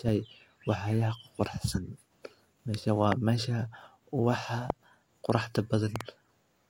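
Speech, with loud pops at 3.12–3.14 s, 4.70–4.72 s and a double pop at 5.96–6.03 s, roughly 15 to 20 dB above the speech, likely from voltage pulses; the speech continues underneath rather than dropping out.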